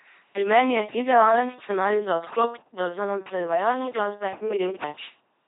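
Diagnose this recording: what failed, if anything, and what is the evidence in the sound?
Codec stage: an LPC-10 vocoder throughout. Pulse-or-noise excitation makes the speech buzzy and robotic, with nothing above 3.8 kHz. Damage this heavy fits 2.4 kbit/s.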